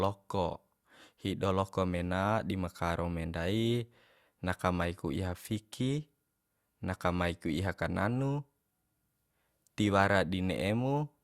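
Nothing goes wrong anywhere in the speech here, so there's no fault to point to at any moment.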